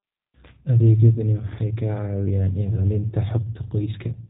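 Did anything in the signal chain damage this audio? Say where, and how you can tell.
Yes, at the codec stage: G.729 coding runs throughout. The speech sounds rough and slightly synthetic, which fits an 8 kbit/s codec rebuilding it from a filter and sparse pulses. A spectrogram shows a hard ceiling near 3.8 kHz, with nothing above it.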